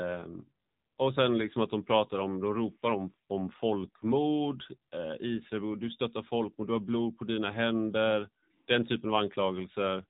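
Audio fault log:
throughout: AMR narrowband mobile codec. The speech passed through a low-rate narrowband mobile coder, which fits AMR-NB near 7.4 kbps. It rebuilds the sound from a vocal-tract model and sparse pulses, leaving it plainly buzzy and synthetic, with nothing above 3.8 kHz.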